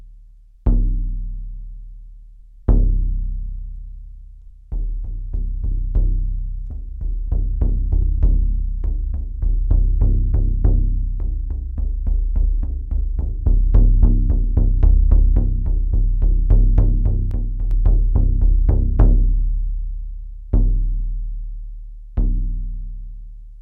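At 6.70 s the audio has a skip ahead. About a fifth of a second is missing, and playback jumps forward and joins the two sides almost without a gap. From 7.28 to 8.60 s a jitter buffer speed-up follows. The receiver trims short pitch-period pieces, about 40 ms in all, so the sound runs 3% fast at unchanged pitch. From 17.31 to 17.71 s there is a sudden gain jump. The sound and its background noise drop together by about 5 dB, likely from a digital gain change applied without a ramp.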